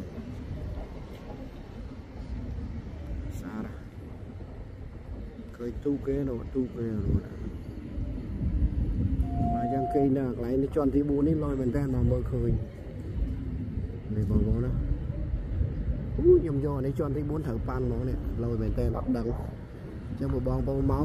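From 9.22 to 10.12 s a loudspeaker feedback squeal rises at 699 Hz, swelling over roughly a third of a second to stand a few decibels above the sound. The microphone re-amplifies its own loudspeaker. That gradual self-building swell at one pitch separates it from an inserted steady tone.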